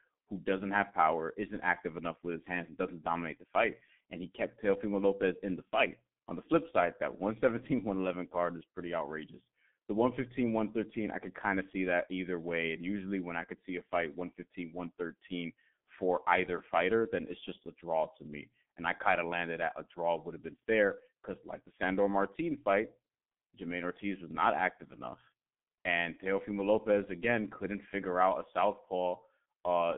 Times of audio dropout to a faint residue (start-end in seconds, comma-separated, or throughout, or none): none